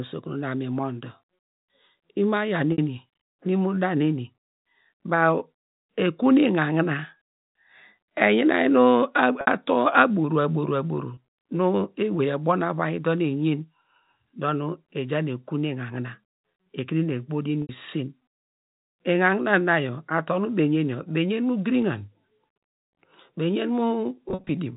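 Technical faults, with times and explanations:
2.72 s, 9.41 s, 11.14 s, 17.62 s: packet loss with pitch repetition. Gaps of 60, 60, 30 and 70 ms went missing in the telephone-band G.711 stream. The receiver filled each gap by looping the last pitch period. At 11.14 s this is a brief held, buzzy tone. The longer gaps run past the roughly 50 ms fade, so the loop dies toward silence before the speech cross-fades back in.
24.29–24.49 s: packet loss with pitch repetition. Losses are scattered over 200 ms, with the longest run 50 ms, which fits 10 ms packets. The repeated-period fill switches on and off in quick succession, giving a stuttering, buzzy patch near the end.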